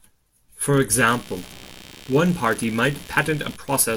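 From 0.91 s to the end, computer activity noise comes in: computer load shifting the shared ground leaves a buzzy chirp pulsing around 70 times a second, sitting well under the speech.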